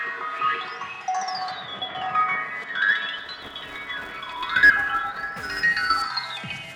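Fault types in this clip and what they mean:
Filter restarted on every block: a processing filter discards its internal state at each block boundary and starts the next block from silence, so every block opens with a small transient. From 3.17 s to 6.07 s this shows as a steady buzz at 345 Hz, which fits a 128-sample block. The buzz rises and falls with the signal level, getting stronger in louder passages and fading in quieter ones.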